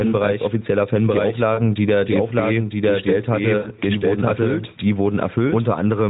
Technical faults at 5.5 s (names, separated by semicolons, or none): doubled audio track; gain pumping; lost AMR speech frames